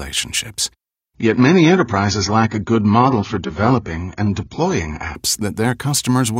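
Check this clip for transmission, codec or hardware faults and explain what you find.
One fault is present, an adaptive stream at a lower bitrate. From 1.15 s to 5.15 s the speech abruptly turns dull and swirly, with nothing above 7 kHz. Then it snaps back to full clarity with no gap either way. The connection slowed, so the player switched to a leaner encoding of the same stream. The sound fits a fall from about 96 kbit/s AAC to roughly 16 kbit/s, where the encoder discards treble and smears detail.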